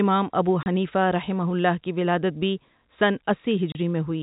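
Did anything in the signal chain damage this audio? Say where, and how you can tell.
Yes, in the network stage. The speech drops to dead silence for 30 ms at 0.63 to 0.66 s and again at 3.72 to 3.75 s, with hard edges. That is packet loss filled with silence, each hole matching a single lost 30 ms packet, under telephone-band G.711 coding.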